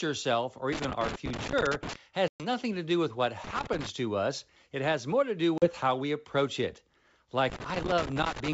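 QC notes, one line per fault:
0.72–1.96 s, 3.44–3.89 s and 7.50–8.54 s, loose connector crackle. Irregular scratchy bursts chop through the sound, the first right after "self or" and the last running to the end of the clip. A worn or dirty contact is making and breaking as it shifts. Each break cuts the signal for an instant, and any DC on the line turns those breaks into sharp pops. That produces the ragged, uneven texture rather than a steady noise.
2.28–2.46 s and 5.58–5.68 s, packet loss on an ADPCM call. Each is a hard-edged hole, one before "to do with what" and one between "has more to do" and "how we approach it". The first gap fits about 120 ms lost, roughly seven packets. The second fits about 40 ms, roughly two. Silence filled the holes. The decoder's predictor and step size then lost sync with the sender, so the sound returns with some distortion before settling. The G.722 wideband coding around the holes adds only faint hiss.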